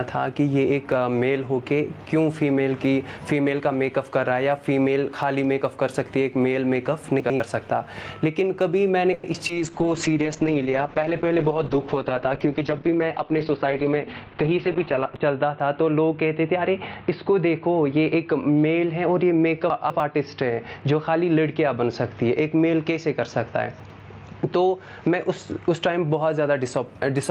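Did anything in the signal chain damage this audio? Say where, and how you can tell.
Yes. Gain pumping runs throughout, at the call-processing stage: the background swells in gaps and ducks by about 15 dB under loud sounds. Unlike a steady noise floor, it follows the programme, likely from excessive gain feeding a fast limiter.

Chunks out of order appear at the buffer or storage stage, at 7.2–7.4 s, 19.7–20.0 s and 23.8–24.0 s. Each 100 ms chunk plays one or two places late. Nothing is missing, which separates this from dropout.

A call audio freeze occurs on the network path at 9.13–9.25 s. The last sound is stretched as a fading buzz or hiss for about 100 ms, then resumes without loss, likely from packets held up in transit.

Short concealed packet loss follows at 9.33 s and 9.48 s, each about 30 ms. These are brief smears rather than a sustained buzz, because the receiver patched small holes and blended straight back.

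A call bitrate drop affects the codec from 9.56 s to 26.92 s. The sound turns rough and muffled, with the top end cut near 4 kHz. That points to Opus falling from 32 to 8 kbps, with the worst stretch lasting about 6 s.

A jitter buffer speed-up runs at 13.20–14.19 s. The audio plays about 10% faster at unchanged pitch, hurried by roughly a tenth of a second trimmed in pitch-period pieces. Resampling would shift the pitch instead.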